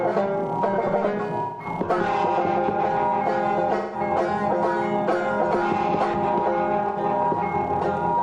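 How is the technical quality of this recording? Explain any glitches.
The music is marred by three dropouts from AAC frame loss with concealment, at 1.41 to 1.65 s, 3.76 to 4.00 s, and 6.88 to 6.98 s. The decoder patches each gap (about 0.17 s, which fits roughly four frames, then about 0.09 s) from the last good spectrum, producing a smeared, phasey blur that shows as flattened, stretched-out spectrogram bands.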